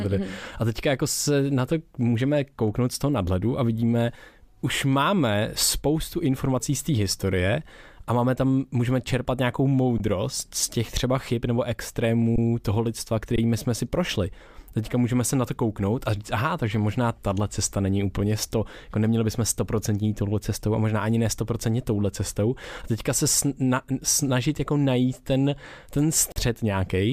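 Speech with underrun with held sample: at 9.98–10.00 s after "tam můžeme čerpat nějakou", 12.36–12.38 s, 13.36–13.38 s after "toho lidstva", and 26.32–26.36 s after "jako najít ten ten", the output freezes on a held value, then resumes where it stopped with essentially nothing lost. Unlike a dropout to silence, there is no hard click.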